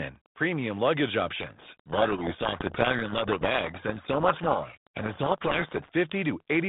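From 1.36 s to 5.88 s the speech is swamped by harsh, grinding distortion, with only a faint trace of it underneath, and then it abruptly clears. This is a codec payload misread: the G.726 code words arrive with their bit order reversed relative to what the decoder expects, so every sample difference is rebuilt from scrambled values and the adaptive predictor wanders. Outside that stretch the narrow telephone band, roughly 150 Hz to 3.7 kHz, carries only light coding grain, consistent with 32 kbit/s G.726.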